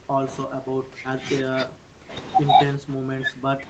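From 0.0 to 0.27 s, 0.45 to 2.13 s and 2.75 s to the end, the speech drops by around 40 dB in chunks, likely speech suppressed in double talk by the echo canceller.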